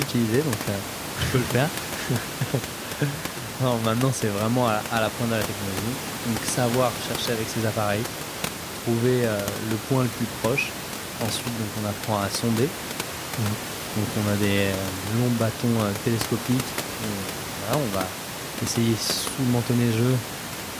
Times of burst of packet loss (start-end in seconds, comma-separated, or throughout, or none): none